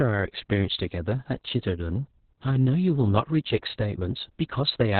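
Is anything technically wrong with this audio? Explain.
Yes. The whole clip has been through heavy Opus voice compression. The encoder appears to be running its SILK speech coder in narrowband mode at a very low bitrate, which fits something around 6 kbps with long 60 ms frames. It discards everything above 4.4 kHz and codes the excitation coarsely. As a result, the speech sounds muffled and boxy, with a hoarse, slightly robotic buzz and no crisp sibilance.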